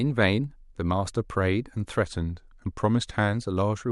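From 2.05 s to 3.33 s, a drift correction step likely occurred: software matching two clocks appears to have slowed playback in one jump to rebalance its buffer. The speech runs about 5.9% slower there, and because speed and pitch move together, it drops about 105 cents, roughly a semitone, sounding suddenly detuned and a little drawn out. At 3.33 s the rate snaps back to normal pitch and pace.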